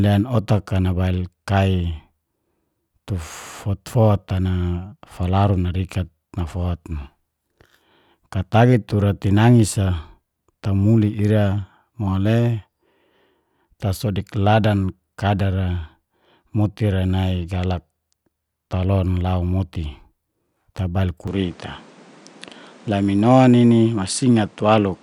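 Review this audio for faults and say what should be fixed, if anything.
From 21.28 s to the end, the speech turns duller. The input likely switched to a poorer device: the spectrogram shows nothing above 10.5 kHz and a new noise floor about 30 dB down, with no gap or waveform level jump. Lock the recording input to one device so the system cannot change microphones mid-session.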